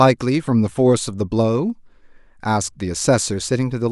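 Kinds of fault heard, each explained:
No technical faults can be heard in the speech. There is nothing here to list or explain.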